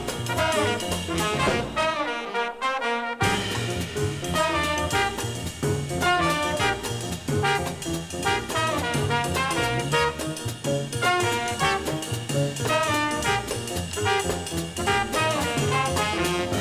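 No technical faults can be heard anywhere in this audio.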